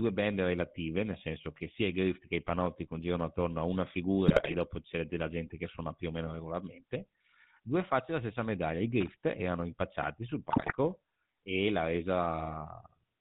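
The whole clip has the sound of the GSM full-rate codec, consistent with the old 13 kbps full-rate stream. The speech is squeezed through a vocal-tract model fed by a sparse pulse train, so it comes out buzzy and gravelly, with nothing above 4 kHz.

From 4.28 to 4.55 s, right after "congirano attorno a una" and before "dopo c'è della gente", GSM bit errors hit. Corrupted filter, pitch and gain values reach the decoder, and the speech breaks into squawks and gargling for a run of frames.

Between 9.01 and 9.08 s, just after "della stessa medaglia i", there's a short burst of loose connector crackle. A bad contact is making and breaking, chopping the signal into scratchy pops before "erano impacciati sul".

Right after "erano impacciati sul", from 10.5 to 10.74 s, GSM bit errors strike again. Mangled decoder parameters bend the spectrum and jolt the level, giving a similar spell of squawking and pops.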